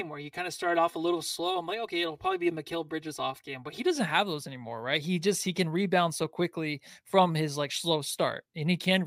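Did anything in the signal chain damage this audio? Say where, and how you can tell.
Yes. From the start to 3.96 s the speech sounds hollow and phasey, typical of channel delay (comb filtering) at the driver or buffer stage. One channel lags the other by roughly 3 ms, and summing them to mono cancels regularly spaced frequencies starting near 200 Hz. A spectrogram shows evenly spaced horizontal notch bands that vanish after 3.96 s.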